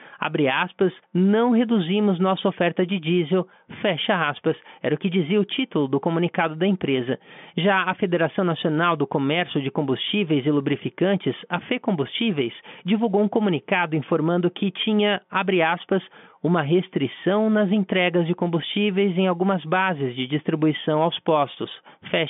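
No technical faults occur in this speech, which comes over an ordinary G.711 telephone line with nothing above about 3.7 kHz.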